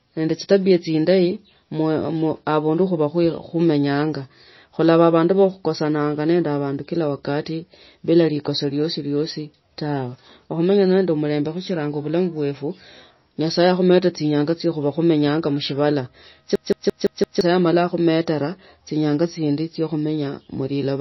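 MP3 compression, likely at a low bitrate around 24 kbps, runs throughout: the encoder cuts everything above 5.8 kHz and drops weak detail, leaving the speech dull and watery.

A system hang loop runs from 16.56 to 17.41 s. The system froze while a 171 ms piece, which fits an 8192-sample buffer, repeated five times at 5.86 Hz, a machine-gun stutter that swallows about a second of speech.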